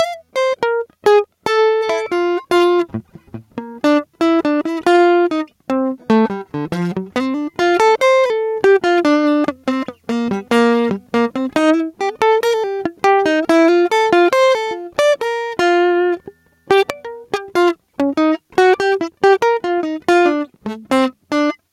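Gain pumping runs through the whole of this music clip. The gain swings by around 5 dB. Loud and soft passages sit closer together than they should, and the result sounds squashed. The likely cause is input gain set far too high, with a fast limiter or compressor clamping down on every peak.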